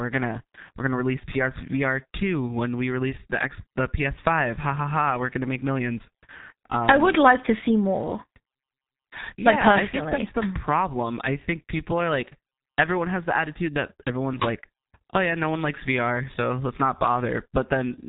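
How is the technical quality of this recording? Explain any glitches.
The recording is heavily degraded from start to finish by G.723.1 codec damage. Nothing above 3.8 kHz survives, so the speech sounds muffled, and the rough, hoarse texture and smeared consonants point to a very low bitrate of around 6 kbit/s. The codec models the voice in 30 ms frames and updates that model slowly, so quick articulation blurs together. A simple low-pass filter would only dull the sound. The hoarseness and blurred consonants show that the coding itself is at fault.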